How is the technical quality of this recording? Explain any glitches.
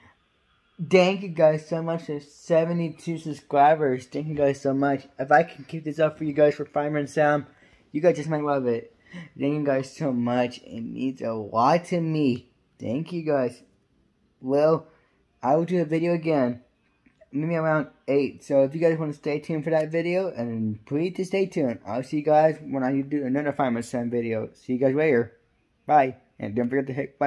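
Nothing here comes across as a glitch: no dropouts, clicks, stutters or other technical hiccups anywhere in this recording.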